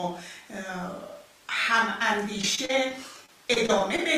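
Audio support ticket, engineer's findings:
Choppy speech 2.41–4.00 s. Repeated packet loss (robotic sound): nine gaps, longest 35 ms, patched by repeating prior audio, roughly an eighth of the stretch concealed.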